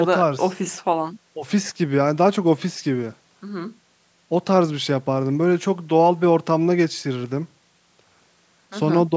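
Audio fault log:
No faults: the speech has been through normal call microphone processing, with the lowest bass trimmed and nothing above 8 kHz.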